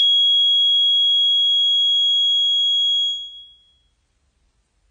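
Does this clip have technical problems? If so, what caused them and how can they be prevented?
Yes. Transcoding between lossy codecs runs throughout the music. Nothing is heard above 8.7 kHz, and different kinds of coding artefacts sit together. This likely comes from a chain of low-bitrate encoders ending in MP3, each re-encoding the previous stage's damage and keeping the lowest cut-off. To prevent it, encode once, directly from a lossless source, at an adequate bitrate.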